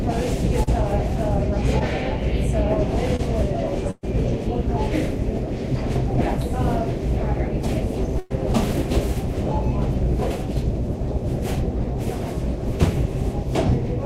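At 0.63 to 0.69 s, 1.79 to 1.82 s and 3.16 to 3.21 s there is short concealed packet loss. Between 20 and 40 ms of audio failed to arrive, and the receiver filled each gap by extending the preceding sound. Each one is heard as a brief smear or wobble.

A burst of packet loss follows at 3.91 to 4.05 s and again at 8.19 to 8.32 s, each time about 120 ms of missing audio. The concealment holds and fades the last sound, and the first gap ends in about 30 ms of silence. The audio then resumes with that stretch gone.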